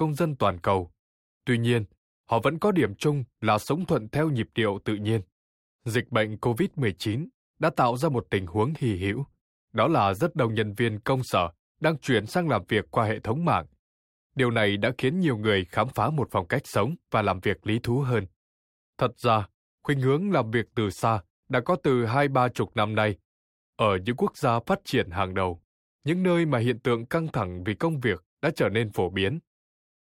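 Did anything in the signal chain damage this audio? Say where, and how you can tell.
No, nothing along the way seems to have harmed this speech, and there's no stage where the chain left a mark you can hear.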